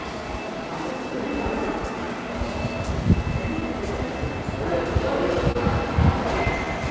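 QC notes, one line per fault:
Throughout: clock drift between sender and receiver. The timing wobbles faintly from start to finish, with small hiccups at uneven intervals. The sender's clock runs about 3 percent slow against the receiver's, so the jitter buffer keeps draining and the receiver must pad it.
0.20 to 6.66 s: repeated timing corrections. The sound drags slightly, at about 98 percent speed, with unevenly spaced stretches. These are repeated short pieces that keep the receiver in step with the slow sender, adding about 150 ms overall.
5.52 to 5.57 s: short stall from a late packet. A brief held moment with a slight buzz or dip. A packet arrived late, the jitter buffer ran empty, and the receiver stretched the last sound for 30 ms. Nothing is lost, and playback resumes where it stopped, over a G.722 path with nothing above 8 kHz.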